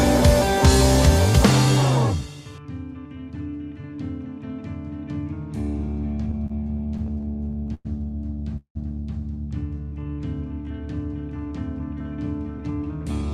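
From 6.31 to 7.87 s there's a run of repeated stalls, a stutter: the jitter buffer kept running dry, so the receiver stretched the last sound 14 times, longest about 105 ms, 293 ms in all. Nothing's lost, but the audio drags and hiccups.

At 8.57 s comes a call audio freeze lasting to 8.77 s. The sound holds as a fading buzz or hiss, then about 90 ms of silence, 183 ms of filler altogether, before resuming where it stopped. Packets were likely held up in transit, pushing everything 183 ms later.

Then from 9.84 to 10.15 s there's a jitter buffer slow-down. The receiver repeated tiny pitch-period slices to rebuild its reserve, adding 54 ms, so the audio plays at 86% speed with unchanged pitch and sounds a bit drawn out.

Finally, 12.58 to 13.23 s brings a jitter buffer speed-up. With too much audio queued, the receiver trimmed short pitch-period chunks, around 40 ms total, so it plays at 106% speed, same pitch, and feels slightly hurried.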